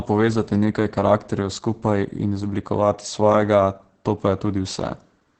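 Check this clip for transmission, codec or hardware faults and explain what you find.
One codec fault runs through the whole speech clip: Opus voice compression. The band stops at 8.6 kHz, and at what sounds like roughly 10 kbps the SILK linear-prediction coder codes the excitation coarsely, leaving speech heavily muffled, hoarse and faintly robotic. A simple low-pass filter would only dull the sound. The grainy, hoarse texture is what points to a codec.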